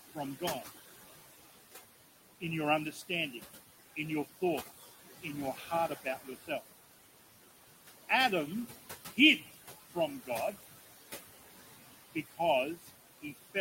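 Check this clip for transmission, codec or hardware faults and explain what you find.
The faults come from an overworked noise suppressor, not from the codec or the hardware.

Noise suppressor artifacts run through the whole clip. The suppressor pulls down the bands it judges to be steady noise by about 15 dB, frame by frame. The room noise, sitting about 11 dB below the speech, therefore drops away in pauses and returns under the voice.

Speech cut by the noise suppressor happens in three stretches: 2.41 to 6.62 s (about 13 dB deep, roughly 0.7 s affected in all), 8.68 to 10.56 s (about 14 dB, roughly 0.3 s), and 12.15 s to the end (about 16 dB). The suppressor mistakes quiet parts of the speech for noise and attenuates them, so soft consonants and word endings sound swallowed or faint.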